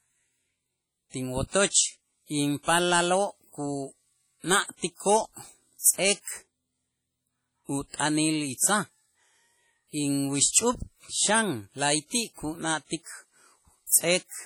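Speech throughout the clip carries heavy WMA compression damage, likely from a low-bitrate encode near 32 kbps. Quantisation noise smears across tens of milliseconds, giving a ringing, washy quality and a hiss that swells and fades with the speech, while weaker spectral detail drops out.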